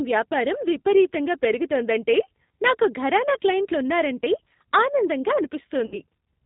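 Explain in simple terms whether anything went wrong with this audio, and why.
Throughout, the speech passes through the G.729 codec, a phone-call coder that rebuilds the voice from a simple model. That makes it rough and synthetic, not merely muffled.

From 5.86 to 6.00 s, VoIP packet loss concealed by the speech codec: about 60 ms went missing. Instead of a silent gap, the decoder stretches the last sound into a fading buzzy tone or noise.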